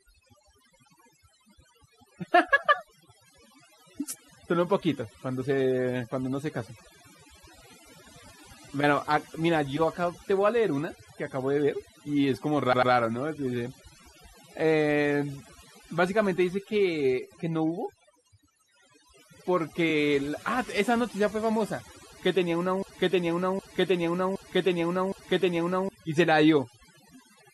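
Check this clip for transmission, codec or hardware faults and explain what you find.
Three kinds of fault are present: overdone noise removal across the whole recording, two repeated-frame stutters, and one broken-record loop near the end.

Overdone noise removal runs throughout. The noise reducer is set so aggressively that frequency bands near its noise estimate are cut almost to nothing, taking quiet parts of the speech with them. The background becomes near silence with twinkling specks.

Repeated frames occur at 12.72–12.91 s and 19.89–19.91 s. In the first, an 85.6 ms block plays twice more, adding 191.6 ms and fitting a run of five frames. In the second, a 23.2 ms block repeats once. Each is heard as a stutter.

A broken-record loop runs from 22.83 to 25.89 s. A fragment of roughly 0.77 s repeats back to back four times. This is likely a stalled player, encoder or stream resending its last buffer. 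The audio that should have played there is lost.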